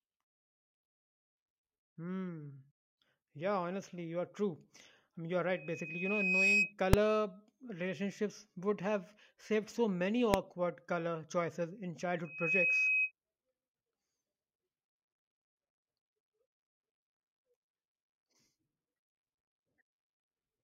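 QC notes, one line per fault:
5.51–6.73 s, loudspeaker feedback squeal: a 2.5 kHz tone swells over about a second to roughly 10 dB above the speech; a single growing pitch, not a click.
6.93 s and 10.34 s, invalid numbers at full scale: 2.67 ms and 0.67 ms blocks pinned at one extreme value, each heard as one sharp bang rather than a sustained tone.
12.24–13.12 s, loudspeaker feedback squeal: the same 2.5 kHz loop tone, rising faster, in about 0.3 s, to roughly 5 dB above the speech.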